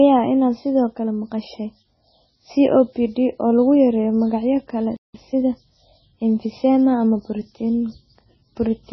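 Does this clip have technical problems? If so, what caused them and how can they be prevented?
Yes. The whole clip carries heavy MP3 compression damage, likely from encoding at a very low bitrate; the dulling and swirl fit something around 16 kbps. Nothing is left above 6 kHz, and the speech sounds watery, with s sounds turning to metallic chirps and consonant attacks smeared. The encoder ran short of bits, so it cut the treble at a fixed point and dropped weak frequency lines that flicker from frame to frame. A plain low-pass filter would dull the sound without that swirl. Encoding at a higher bitrate, or using a codec better suited to low rates, prevents it.

A playback stall follows "magacyo kale": the audio goes silent from 4.97 to 5.14 s, a gap of about 0.18 s. It is likely that the player ran out of buffered data or its thread was blocked. Packet loss would usually leave brief clicks or patched fragments. 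Here there is one clean silence. A larger playback buffer and keeping the audio thread from being starved would prevent it.

Time-compressed catch-up follows straight on, from 5.14 to 6.90 s. The player trims its backlog by cutting out small pieces and cross-fading across them, so the speech runs at about 1.1 times normal speed. The pitch stays normal, which is what separates this from simply playing the audio faster, where the voice would also rise. Preventing the stall removes the need for catch-up, and a gentler catch-up rate would make it less noticeable.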